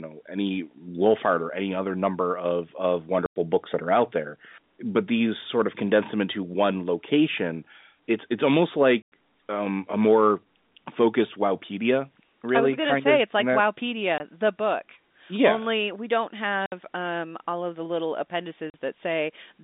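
Packet loss filled with silence cuts gaps of 100, 100, 20, 60 and 40 ms into the speech at 3.26, 9.02, 14.18, 16.66 and 18.7 s. The lengths are all multiples of 20 ms, which fits 20 ms packets. Each gap starts and stops with a hard edge.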